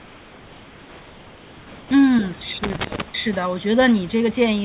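From the start to 1.91 s, the background is a steady, featureless hiss, about 3 dB quieter than the room noise heard once the speech begins. It has none of the small shifts and texture of a real room, and it sits about 27 dB below the loud speech. This is likely comfort noise in place of the background: the sending side stopped transmitting during the pause, and the receiver filled the gap with synthetic noise roughly matched to the room's level and spectrum.

From 2.64 to 3.02 s there is an irregular burst of scratchy crackle, lasting under half a second. This is loose connector crackle. A worn or dirty contact in the cable or jack was making and breaking as it moved, chopping the signal on and off many times in quick succession, and any DC on the line turned each break into a click. The whole clip is band-limited with nothing above 4 kHz, which fits a narrowband call codec.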